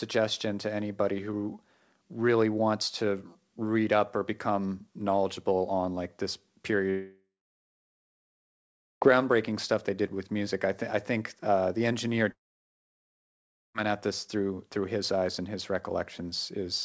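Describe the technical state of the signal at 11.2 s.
At 11.2 s the speech is intact, with no fault at that moment; it carries the ordinary character of a wideband call codec path, which here points to G.722 and leaves nothing above 8 kHz.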